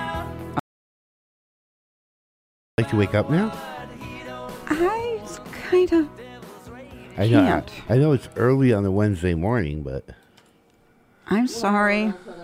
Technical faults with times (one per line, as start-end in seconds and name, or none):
0.59-2.78 audio dropout to silence